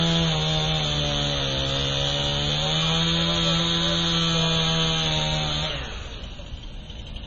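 From start to finish the audio has a hard ceiling, with nothing above 7.4 kHz, and a heavy watery, swirly texture laid over everything. That's likely MP3 compression at a very low rate, something that fits roughly 22 kbps. Starved of bits, the encoder chops the treble at a fixed point and drops the quieter frequency lines, which then flicker in and out from frame to frame. That flicker is the swirl you hear.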